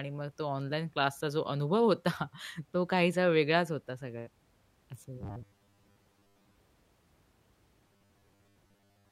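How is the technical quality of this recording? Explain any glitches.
The recording has two stretches of robotic sound from repeated short buffers, from 5.21 to 6.55 s and from 7.88 s to the end. The speech becomes a rigid, metallic 100 Hz buzz. This is likely from a roughly 10 ms buffer being replayed when new audio arrived too late, so most of the real audio was skipped.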